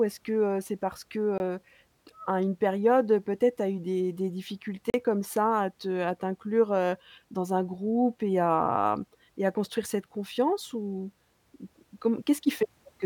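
Short holes cut through the speech at 1.38 to 1.40 s and 4.90 to 4.94 s: blocks of digital silence, 20 and 40 ms, likely from unfilled output buffers.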